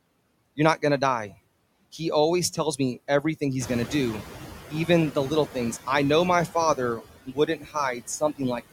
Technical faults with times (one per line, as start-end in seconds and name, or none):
0.00-8.72 noise suppressor artifacts
3.60-4.25 noise suppressor catching up
7.26-8.41 speech cut by the noise suppressor